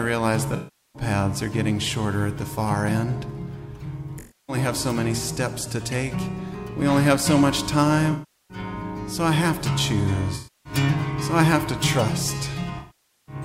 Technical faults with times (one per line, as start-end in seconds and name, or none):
0.56-1.02 AAC frame loss with concealment
4.19-4.56 AAC frame loss with concealment
8.11-8.58 AAC frame loss with concealment
10.35-10.73 AAC frame loss with concealment
12.78-13.35 AAC frame loss with concealment